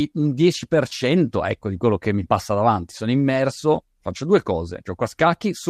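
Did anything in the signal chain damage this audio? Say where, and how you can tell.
Yes. A lost packet rebuilt from error correction at the network stage, at 3.75 s just before "faccio due". A 20 ms stretch turns briefly rough and grainy with no gap, which points to one lost packet replaced by the low-bitrate backup copy carried in the following packet.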